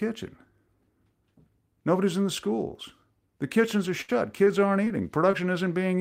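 At 4.01 s the speech hits a burst of packet loss lasting until 4.10 s. For 70 ms the receiver keeps extending the last sound it decoded, letting it decay, so there is a brief held, fading tail. Then 40 ms of speech is simply gone, and playback resumes further on. The delay shifts by 30 ms across the gap.

Four short concealed packet losses follow, each replacing roughly 20 ms of audio. The first is at 4.44 to 4.48 s. The second runs from 4.84 to 5.02 s, and within it a third is at 4.88 to 4.92 s. The last is at 5.31 to 5.35 s. Each time the decoder patches the hole with a 13 to 20 ms extrapolation of the preceding sound and then crossfades back, which comes across as a quick smear or wobble. Around 4.84 to 5.02 s the adaptation adds about 15 ms of delay, stretching that passage slightly.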